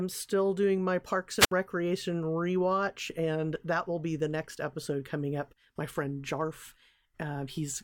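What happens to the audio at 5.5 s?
Nothing goes wrong at 5.5 s; the speech plays through that moment intact, with no dropout, click, distortion or other fault.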